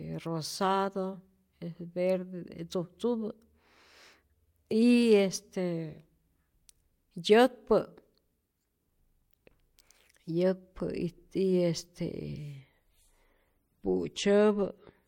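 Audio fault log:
12.58 to 15.07 s, adaptive stream at a lower bitrate. The speech quality drops suddenly, with no gap. Codec artefacts rise to the end. The change fits a slowed connection forcing a switch from about 128 kbit/s MP3 to 48 kbit/s.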